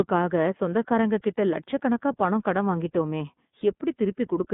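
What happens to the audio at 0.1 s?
iLBC codec damage, present from 0.1 s through the whole clip: each 30 ms frame is coded on its own within a band near 150 Hz to 3.6 kHz, leaving the speech plainly rough, synthetic and dull, which fits the 13.33 kbps mode.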